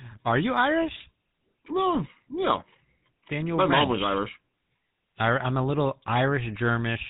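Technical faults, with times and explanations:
Throughout, GSM full-rate codec: nothing above 4 kHz, and the speech has that gravelly buzz from pulse-driven vocal-tract modelling, consistent with a 13 kbps phone link.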